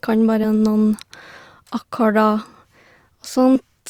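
At 0.43 s the speech lurches forward, and at 3.55 s the same thing happens again, larger. These are compressed frames skipped. The decoder never played a couple of frames at the first point, losing roughly 40 ms, and a few frames at the second, around 70 ms. The jump sizes fit 20 ms frames.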